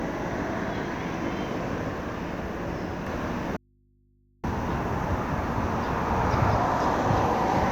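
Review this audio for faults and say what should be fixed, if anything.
From 3.07 to 6.53 s a doubled audio track is audible: a second full-band copy trails about one second behind at roughly equal level, with no decay or room colour, which sets it apart from an echo or reverb. It likely comes from a slower second capture path or an edit holding two misaligned copies. Route the source through a single path and check edits for duplicate layers.

From 3.57 to 4.44 s there is an audio dropout to a faint residue: the sound cuts out abruptly for 0.87 s, leaving only mains hum about 35 dB below the signal. The live hum, rather than silence or a fade, marks it as a likely break upstream with the input still open. Secure the connection or source feeding that input, and monitor for signal loss while recording.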